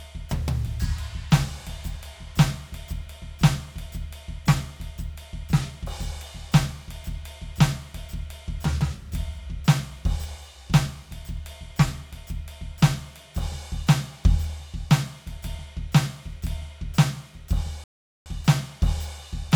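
A music clip with one rebuffering stall near the end: at 17.84 s the sound drops to silence for about 0.42 s, then picks up at 18.26 s exactly where it left off. The player ran dry of downloaded audio and waited, so nothing's missing, just 420 ms of dead air added.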